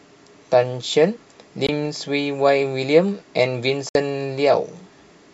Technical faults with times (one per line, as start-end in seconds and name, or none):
1.67-1.69 Bluetooth dropout
3.89-3.95 Bluetooth dropout